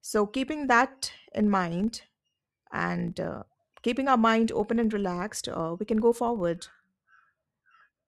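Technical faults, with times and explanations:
Throughout, filter restarted on every block: a steady buzz at 25 Hz rides under the speech, rising and falling with its loudness. The filter discards its internal state at each block boundary and starts again from silence, so every block opens with a small transient as the filter settles. Those transients repeat every 40 ms, and their regular spacing fuses into a buzz whose strength follows the signal level, fading in pauses.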